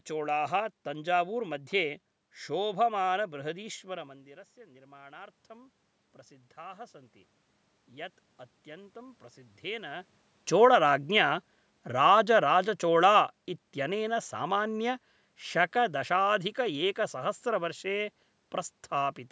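Around 3.5 s the talker drops back from the mic, losing about 18 dB, and from 3.33 s to 11.01 s the automatic gain rising kicks in: the control slowly winds its gain up by about 11 dB, so the voice and the room noise swell back together.

Then around 10.0 s the talker comes close again, and from 10.49 s to 16.86 s you get automatic gain falling. The level jumps out loud at first because the gain is still high, then the control eases it down by about 6 dB, and the background sinks along with it.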